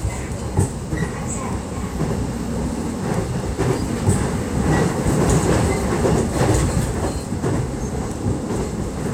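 No technical faults are audible.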